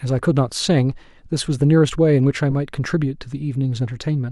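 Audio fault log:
2.50 to 2.53 s, corrupt frame decoded. A short chirp-like burst cuts through the speech for about 30 ms. Damaged bits in compressed frames were played as if valid, throwing energy to wrong frequencies. It peaks near about -15 dBFS and spans what sounds like roughly three frames.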